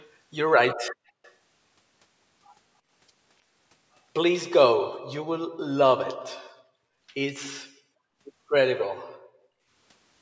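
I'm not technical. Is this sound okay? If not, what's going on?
No, there are two kinds of problem in this speech recording.

Echo leak, at 0.0 to 0.07, 1.23 to 1.32 and 8.78 to 8.85 seconds: brief copies of the voice arrive late, between 0.27 and 0.31 seconds behind. The first two are very quiet, but the one near 8.8 seconds is much more noticeable. This is likely because someone on the call was using a loudspeaker, and their system failed to remove all of the sound its microphone picked back up.

Background gated by the echo canceller, at 0.89 to 1.04 and 9.42 to 9.70 seconds: the room's background sound suddenly drops almost to silence for a moment, about a sixth of a second the first time and about a third the second time, then returns. This happens when the system that fights echo briefly turns the microphone right down while the loudspeaker is playing.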